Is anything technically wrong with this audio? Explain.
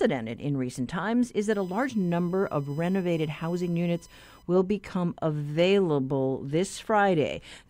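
Yes. From about 1.52 s to 4.43 s there is USB whine: the bus's 1 ms frame timing draws current in bursts that leak through power or ground into the signal path, producing a steady fixed-pitch 1 kHz tone sitting well under the speech, roughly 35 dB below it.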